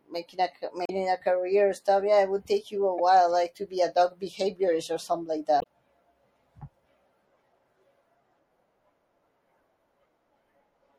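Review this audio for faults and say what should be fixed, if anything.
The speech sounds watery and dull throughout, with the treble cut off. This is likely MP3 compression at a low bitrate, around 64 kbps. Encode at a higher bitrate or use a lossless format.

Damaged data in a compressed stream causes short glitches at 0.83–0.90, 2.98–3.00 and 5.59–5.66 seconds. The decoder misreads corrupt frames and resyncs. Verify file integrity and use error-checked transfer.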